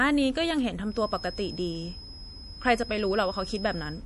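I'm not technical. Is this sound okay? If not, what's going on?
No, it isn't quite right. The whole clip has MP3 compression damage that's easy to hear. The encoder was likely squeezed for space, so it threw away everything above about 11.5 kHz and dropped quieter detail that flickers in and out from moment to moment. That's why the voice sounds a bit dull, watery and swirly, with a metallic, chirpy edge on the s sounds and smeared starts to syllables.

From about 0.82 s right through to the end there's also a feedback whistle: a thin, steady high tone at around 5.1 kHz sitting behind the speech, a fair bit quieter than the voice and slowly swelling and fading in level. It's likely a loudspeaker leaking back into the microphone, with the loop hovering just short of a full howl, so that one pitch keeps ringing without growing.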